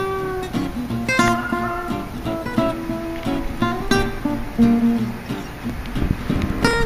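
From 5.64 to 6.73 s, processor overload crackle: the processor repeatedly fails to finish its very short buffers, around a millisecond and a half each, on time, and about twenty are skipped. Each skip leaves a tiny hard-edged gap, heard together as gritty crackling tearing through the sound.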